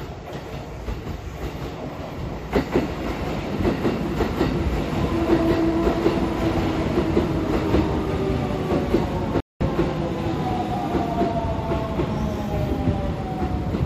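At 9.40 s the sound halts mid-flow and the output falls silent for about 200 ms, resuming at 9.61 s. This is a playback stall, most likely the player running short of data or its thread being blocked until it could deliver audio again. A brief dropout is a short hole of a few milliseconds, and an edit cut removes material with no pause. This is a clean silence long enough to hear as a hesitation in the sound.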